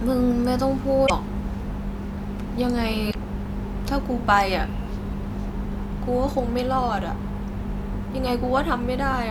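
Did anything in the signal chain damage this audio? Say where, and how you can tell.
Yes. Two short glitches break into the speech, at 1.03 to 1.10 s and again at 3.07 to 3.15 s, each a blip of about 70 to 80 ms that doesn't belong to the voice. That points to damaged data in a compressed stream, at the codec or storage stage: corrupted bytes made the decoder misread those frames and lose sync, emitting garbage until it found the next valid frame header and resumed.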